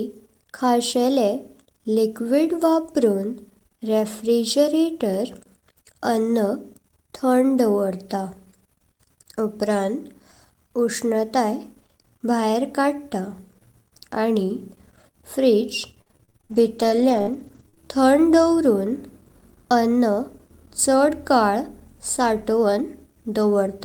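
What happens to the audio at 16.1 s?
Right at 16.1 s you're inside a stretch of repeated packet loss (robotic sound) running from 15.91 to 17.78 s, just before "थंड दावरून". Packets keep going missing. Each hole, the longest about 48 ms, gets patched by stretching the last bit of sound, and then the next dropout hits. About a dozen of those gaps add up to roughly 0.4 s of patched-over audio, so the speech comes out choppy and robotic, with pieces missing.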